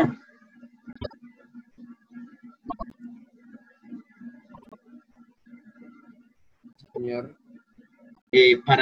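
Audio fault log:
0.93–1.14 s, 2.68–2.94 s, 4.54–4.75 s, 6.78–6.98 s, 8.17–8.33 s: frames out of order. In each stretch two neighbouring blocks got swapped, so the later slice of sound plays before the earlier one. That gives a brief garbled flutter. The blocks are 78.4 ms or 104.5 ms long, which fits swapped runs of three or four codec frames. Nothing goes missing, so the timing around each spot stays intact.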